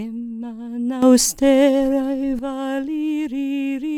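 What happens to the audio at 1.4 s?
At 1.4 s the audio sits inside a sudden gain jump. It begins at 1.02 s and lasts until 2.39 s. Across that span, the whole signal is about 10 dB louder. The sound and its background noise rise together, with no fade in or out. The likely cause is a digital gain change applied from one sample to the next, without any ramp. At 2.39 s the level drops back just as abruptly.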